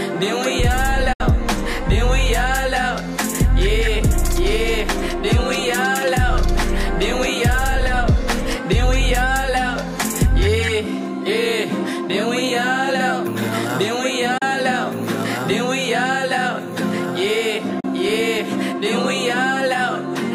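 A digital broadcast dropout mutes the audio three times: from 1.13 to 1.21 s, then 14.38 to 14.42 s, then 17.80 to 17.85 s. Each gap begins with a quick fade of about 8 ms into silence, and the sound resumes further along, not where it stopped. The first hole's length fits two lost frames, the later ones a single frame. Unlike packet-loss concealment, nothing is repeated or smeared to fill the gap.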